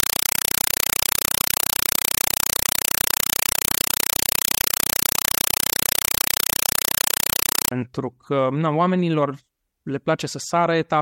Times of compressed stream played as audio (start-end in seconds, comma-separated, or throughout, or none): 0.00-7.71